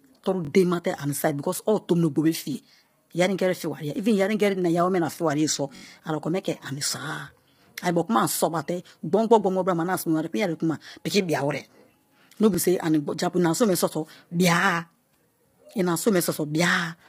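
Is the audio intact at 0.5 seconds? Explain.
No. Just before that moment, new audio failed to arrive in time, so the device replayed its last buffer. This repeated buffer, lasting about 21 ms and consistent with a 1024-sample buffer, sounds three times in all between 0.45 and 0.49 s. Hard joins make it a brief buzzy stutter, with essentially no audio lost.

The speech at this point is also carried through heavy low-delay AAC compression, likely AAC-ELD at a low bitrate around 24 kbps. Its short frames blur the pitch harmonics, so the voice sounds rough and grainy, with nothing above 15.6 kHz.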